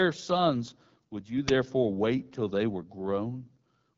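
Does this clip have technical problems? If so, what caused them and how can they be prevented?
Yes. Throughout, the speech has the rough, raspy texture of the AMR wideband (HD Voice) codec at a low 8.85 kbit/s. Its vocal-tract model is starved of bits, and nothing reaches above 7.5 kHz. Unlike narrowband telephony, sibilants keep some noisy top end. Sending at 12.65 kbit/s or higher prevents it.

At 1.48 s, between "sons would you" and "wait till they were", a 10 ms burst of loud digital noise is an uninitialised buffer: leftover memory was played as samples. Unlike a click or dropout, it is a harsh noise block. Zero-filling buffers before playback prevents it.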